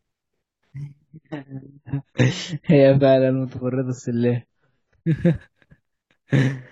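Speech with an adaptive stream at a lower bitrate from 1.08 to 5.08 s: treble stops abruptly above 7.6 kHz, a flat spectrogram ceiling, no waveform gap.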